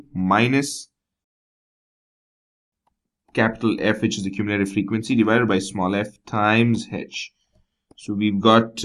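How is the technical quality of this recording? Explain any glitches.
No technical faults are audible.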